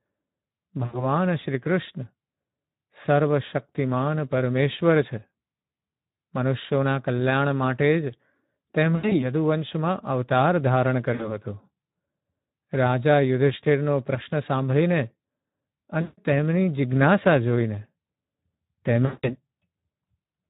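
Speech sounds hoarse and noisy throughout, which is plainly audible Speex codec damage; the CELP coding is starved of excitation bits, fitting a low setting around 11 kbps. At 0.85–1.04, 8.95–9.24, 11.13–11.37, 16.01–16.18 and 19.05–19.36 s, the sound smears into a fading buzz or coloured noise, stays weak afterward, and is worst in the last two. This is VoIP packet loss concealed by the speech codec: the decoder extrapolates its last pitch and filter with falling gain across gaps of roughly 60 to 180 ms.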